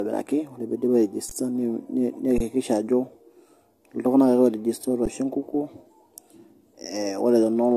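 Generation loss runs through the whole of this speech recording. The sound is swirly, smeared and hollow, with blurred attacks and nothing above 14.3 kHz, most likely from AAC-LC at 64 kbit/s being decoded and re-encoded a few times, each pass adding fresh quantisation noise and spectral holes. An underrun with held sample occurs at 1.29 s (17 ms), 2.38 to 2.40 s (22 ms) and 5.06 s (12 ms, which fits a 512-sample buffer). The output ran dry, the waveform froze flat at its last value, and playback then resumed where it stopped, so each gap ends softly.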